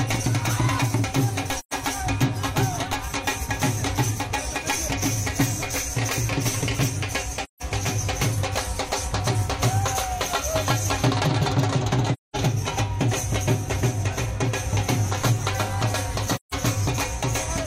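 AAC frame loss with muting: the decoder zeroed lost frames, so overlapping windows fade the sound into soft-edged holes at 1.59–1.74 s (128 ms), 7.44–7.62 s (171 ms), 12.13–12.36 s (213 ms) and 16.36–16.54 s (171 ms), lengths that fit runs of three to five frames.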